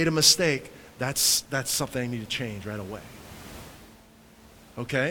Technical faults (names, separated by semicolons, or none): none